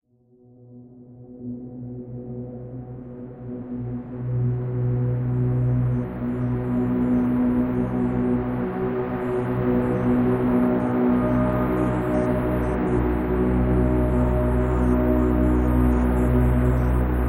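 No technical faults can be heard anywhere in this recording of sounds. Nothing in the audio points to a problem in how it was captured, processed or delivered.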